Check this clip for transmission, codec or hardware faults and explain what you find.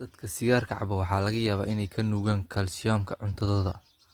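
One codec fault runs through the whole speech clip: Opus compression, most likely from the encoder's music (CELT) mode. The coder keeps each band's energy but, short of bits, fills bands by folding lower ones or with noise, so the damage is plainly audible as a rough, grainy texture on the voice, which fits a rate around 24 kbps. Unlike MP3, it leaves few spectral holes and so swirls less, and the band stays full, reaching 20.2 kHz.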